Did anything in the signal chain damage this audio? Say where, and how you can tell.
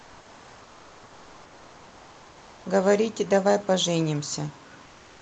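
Yes. At the call-processing and codec stage, comfort noise replaces the background from 0.0 to 2.65 s and again from 4.85 s to the end at 5.21 s. In both stretches the room background, about 29 dB below the loud speech, is replaced by a steady, featureless hiss, about 1 dB and about 2 dB quieter respectively. This is likely Opus discontinuous transmission filling the pauses. A gate or dropout would leave silence instead of synthetic noise.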